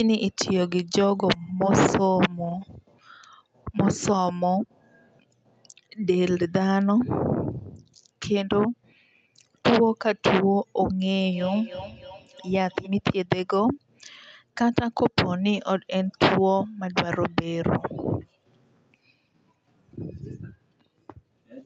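From 11.31 to 12.97 s, feedback echo between two devices repeats the speech about every 0.3 s, about 16 dB down. On a spectrogram it shows as evenly spaced ghost copies.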